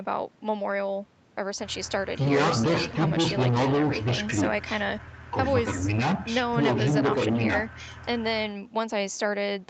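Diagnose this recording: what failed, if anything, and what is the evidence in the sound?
Nothing in this speech recording points to a failure at any stage. What can be heard is the ordinary signature of a call path: the top end stops at about 8 kHz, which fits an Opus call link running at wideband, with the microphone processing's high-pass trimming the lowest bass as it normally does.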